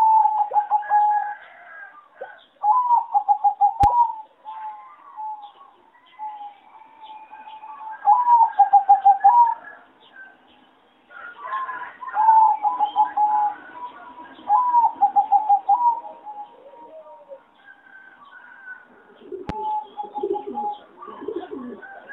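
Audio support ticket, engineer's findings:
Loud pop, twice: 3.84–3.86 s and 19.49–19.52 s. Each is a single pop about 10 dB above the signal, with the sound continuing underneath. Likely a voltage step or pulse from a plug, switch, static or driver glitch. Waveform: isolated spike. Spectrogram: thin full-band vertical stripe.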